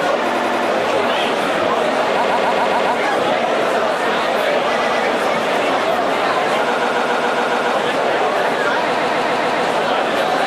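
Repeated frames stutter this everyday sound five times. A short block of compressed audio was played again and again, so the same fraction of a second loops before the sound moves on. The loops fall at 0.30–0.67 s (a 93 ms block, four extra plays), 2.22–2.92 s (139 ms, five), 4.78–5.01 s (116 ms, two), 6.75–7.73 s (139 ms, seven) and 8.93–9.63 s (139 ms, five). Block lengths like these suggest runs of several codec frames. On a spectrogram or waveform, each stretch shows identical tiles side by side.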